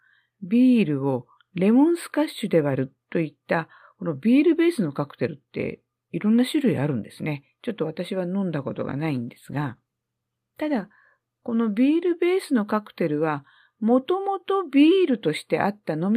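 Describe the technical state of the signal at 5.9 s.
At 5.9 s the speech signal is intact, with no audible fault at that moment.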